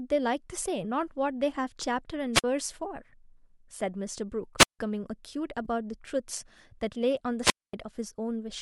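At 2.33 to 2.44 s, 4.58 to 4.79 s and 7.42 to 7.74 s, wireless microphone squelch dropout occurs. The radio signal fades, hiss rises, and the receiver mutes for 47, 159 and 236 ms before the speech returns. Each mute shows as a flat gap in the waveform and a blank column in the spectrogram.

At 5.65 s there is AAC frame loss with concealment. About 10 ms, one frame of what is likely low-delay AAC-ELD coding, is replaced by the decoder's estimate from the previous spectrum. It is heard as a brief smeared, noisy or phasey blip, and the spectrogram shows a narrow stripe where the harmonic lines blur.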